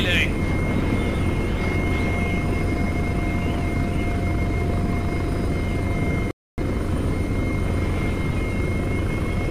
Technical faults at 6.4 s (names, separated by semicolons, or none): playback stall